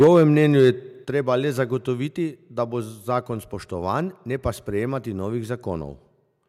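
From 0.0 to 0.7 s the speech peaks are flattened with a harsh, crackling edge. This is microphone overload, likely from an input level roughly 5 dB too hot, so a few percent of samples hit the converter's ceiling and their tops were cut off. The microphone volume stepped down three times, at 0.04 s, 1.05 s and 2.07 s, with abrupt level drops of about 3 dB, 6 dB and 2 dB affecting voice and background alike. The likely cause is the call software reacting to the clipping by cutting the device's input gain in single steps.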